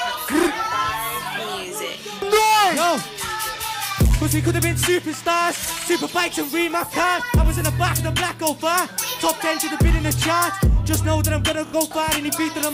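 Repeated frames at 5.81 s and 11.66 s: a short block of about 46 ms, then about 36 ms, replays, giving a brief stutter.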